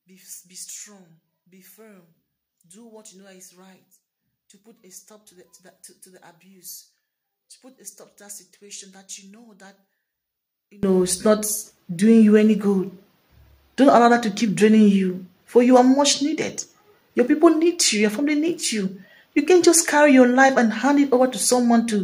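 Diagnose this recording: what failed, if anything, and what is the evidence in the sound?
One channel inverted, from 0.0 to 10.83 s: summed to mono, the sound drops by about 24 dB. The likely cause is a polarity swap in the analogue wiring, so material common to both channels cancels and only their faint difference remains.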